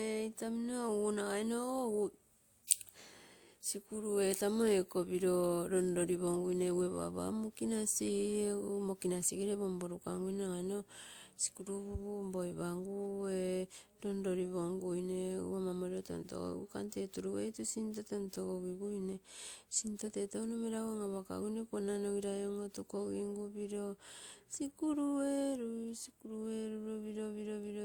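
A speech clip with layered coding artefacts from start to end. Two kinds of codec artefacts sit on top of each other. Nothing remains above 20.2 kHz. This points to transcoding between lossy codecs, likely WMA at around 96 kbit/s re-encoded as Opus at around 48 kbit/s.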